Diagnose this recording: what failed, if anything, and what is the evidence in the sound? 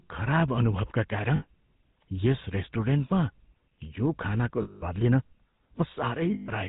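GSM full-rate codec damage runs from start to end, a codec-stage fault: the whole clip has the gravelly, buzzy texture of a coarse pulse excitation driving a vocal-tract model, with nothing above 4 kHz. That sound fits a 13 kbps full-rate coder.

Lost GSM frames, a network-stage fault, occur at 1.36 to 1.44 s, 4.62 to 4.84 s and 6.34 to 6.50 s. Each gap becomes a rough metallic ring as the last good frame repeats. The longest, about 200 ms, fits ten 20 ms frames lost.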